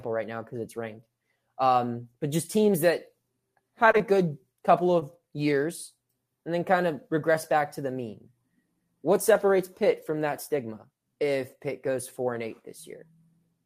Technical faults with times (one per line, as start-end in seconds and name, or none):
3.91-4.01 short concealed packet loss
4.99-5.03 short concealed packet loss